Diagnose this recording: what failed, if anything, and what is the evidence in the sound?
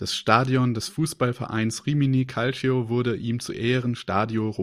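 Nothing failed: the recording carries no evidence of any fault in the sound.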